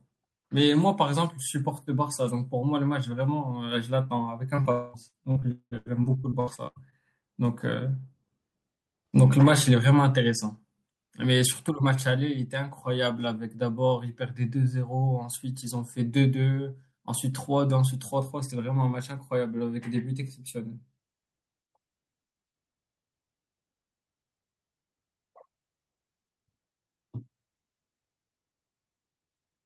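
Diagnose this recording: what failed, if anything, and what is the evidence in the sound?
Network stage, short concealed packet loss: brief smears at 4.55 s (about 20 ms) and 4.62 s (about 40 ms), where the decoder extended the preceding speech across missing packets.

From 4.71 to 4.96 s the speech stops and a synthetic continuation of the last sound fades over roughly a quarter second, likely a long network dropout with concealment covering the gap.

Repeated packet loss (robotic sound) from 5.08 to 6.94 s: twelve concealed gaps, the longest 0.2 s, patch about a third of the span, producing choppy speech.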